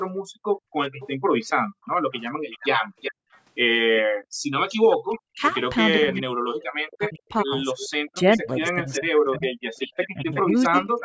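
From 0.11 to 4.51 s the background is gated by the echo canceller: while the far side's loudspeaker plays, the room tone drops by about 40 dB, for about two seconds in all. Only the ambience vanishes and returns.

From 1.0 s to the end there is an echo leak: a second copy of the voice trails the original by about 0.37 s, sitting roughly ten decibels below it. The likely cause is a loudspeaker echo canceller that failed to remove everything its microphone heard. That fixed lag distinguishes it from room reverberation.

Between 5.21 and 10.91 s the speech is suppressed in double talk, likely because both sides spoke at once and the canceller turned everything down. The voice itself dips by as much as about 40 dB, in pieces totalling around three seconds. Unlike the earlier gating, the talker is affected, not the background. Throughout, the call's microphone processing leaves nothing above 8 kHz.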